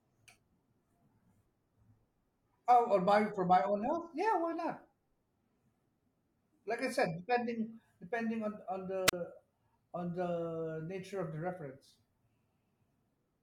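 At 9.07 s the speech breaks up in a wireless microphone squelch dropout. The event lasts about 0.06 s, ending at 9.13 s. The radio link from the transmitter weakens. As the carrier fades, a short burst of hiss rises. The receiver's squelch then shuts the output off. That leaves a gap of near silence of about 36 ms. When the signal recovers, the squelch reopens and the speech comes back.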